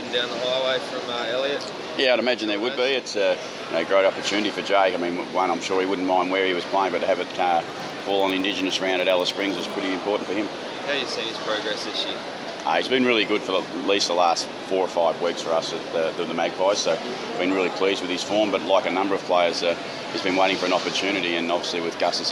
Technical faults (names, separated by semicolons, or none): resampler restarted on every block